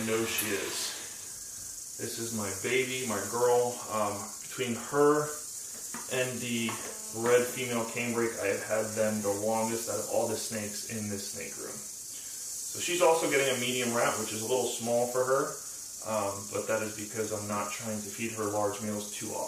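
GSM phone buzz from 6.57 to 8.18 s: rectified 217 Hz transmit bursts, a steady rasp about 21 dB down, drawn as stacked spectrogram harmonics.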